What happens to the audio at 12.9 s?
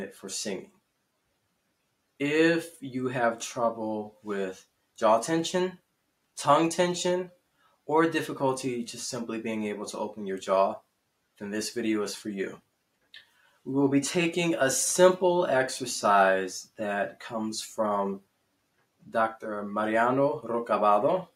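The noise suppressor mistook the audio for noise from 12.59 to 13.66 s, cutting it by up to about 18 dB, so it sinks sharply.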